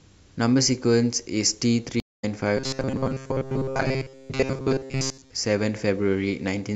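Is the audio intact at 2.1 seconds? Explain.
No. A stream reconnect spans 2.0 to 2.24 s. The connection dropped, leaving about 0.2 s of silence. A fresh decoder then started mid-stream. The speech resumes roughly a fifth of a second further on, so a short stretch is skipped.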